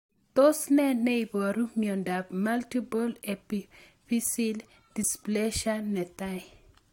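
No technical faults can be heard anywhere in the recording, which keeps a steady, intact signal throughout.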